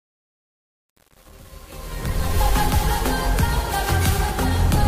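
Truncation distortion on the fade runs from the start to 2.40 s, across the fade-in. The gain stage driving the fade keeps only about 7 bits and adds no dither, so at low levels the waveform collapses onto a handful of coarse steps. From 0.0 to 2.24 s the quiet portion sounds gritty and granular.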